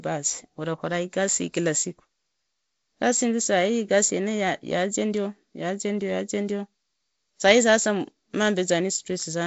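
No faults in this speech; what is audible is the wideband telephone coding, which sounds like G.722 with nothing above about 7.7 kHz, a light hiss in the upper band and a faint graininess lower down that fits the 48 kbit/s mode.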